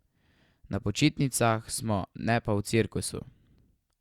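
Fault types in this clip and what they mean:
No fault types are present in this clip.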